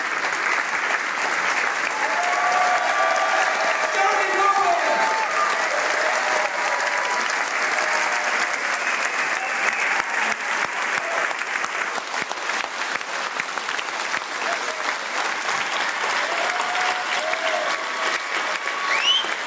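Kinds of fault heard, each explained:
No faults turn up anywhere in this one, so there's nothing to list.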